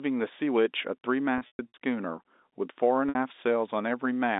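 From 1.38 to 1.74 s, packet loss with pitch repetition breaks up the speech. About 210 ms of audio is missing, scattered across 360 ms, with the longest gap 120 ms. The receiver fills each hole by repeating the last pitch period, so the sound turns buzzy and held, then fades out on the longest gap. At 3.09 to 3.15 s, a shorter 60 ms loss gives a brief held buzz. The narrow telephone band, roughly 250 Hz to 3.7 kHz, carries through both.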